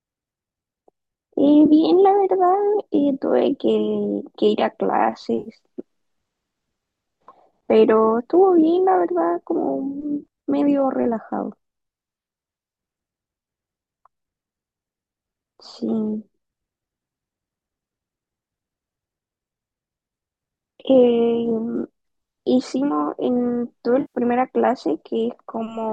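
Speech, with AAC frame loss with concealment at 1.66–1.70 s, 5.40–5.49 s and 24.01–24.18 s: gaps of 30, 60 and 130 ms, likely in a low-delay AAC stream, patched from the last good spectrum. A spectrogram shows smeared, harmonic-less noisy blocks there.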